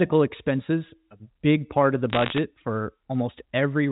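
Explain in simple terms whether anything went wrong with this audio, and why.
From 2.1 to 2.38 s the speech crackles with sharp ticks. These are bit errors on a digital phone line, where each flipped bit spoils one sample.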